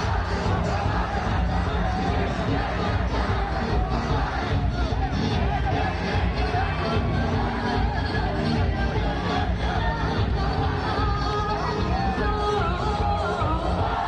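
No technical faults can be heard anywhere in this audio. There is nothing to mark at any point in the clip.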